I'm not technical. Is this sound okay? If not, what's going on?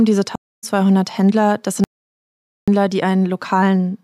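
No. There are two faults in this speech. From 0.36 to 0.64 s there is a stream reconnect. The connection broke, and the player went quiet for about a quarter of a second. When it reconnected, the audio picked up roughly 0.2 s further on, so that bit is skipped.

From 1.84 to 2.68 s there is an audio dropout to silence. The sound cuts out completely for about 0.84 s, with no background noise at all. The input was likely lost while recording continued. Whatever was said then is gone.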